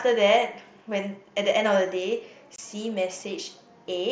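At 2.56 to 2.59 s, unconcealed Bluetooth headset packet loss cuts about 23 ms from the link between headset and phone, which fits three lost packets on this mSBC link. Nothing fills the gap, so the speech drops into a brief hole with abrupt edges.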